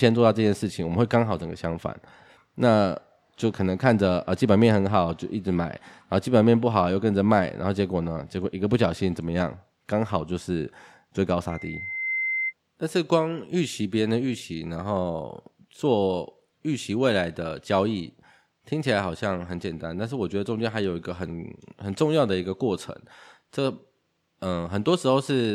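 At 11.49 s a loudspeaker feedback squeal swells over about 0.7 s into a steady 2.1 kHz tone, as loud as the speech, lasting until 12.53 s. The gradual build at one fixed pitch separates it from a test tone.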